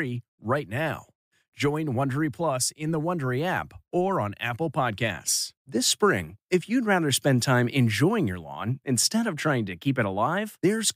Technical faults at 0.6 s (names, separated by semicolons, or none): none